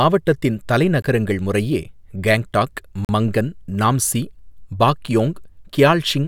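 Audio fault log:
1.02–1.04 s, 3.05–3.09 s and 5.07 s: gap between stream segments. The speech drops into hard-edged silence for about 20 ms, 42 ms and 6 ms, recurring roughly every 2 s. That spacing matches 2-second segment boundaries where the timestamps of adjacent segments don't meet, so the player inserts silence to bridge the shortfall. The abrupt cut-out and restart make each hole audible as a click-bounded dropout, though no audio content is missing.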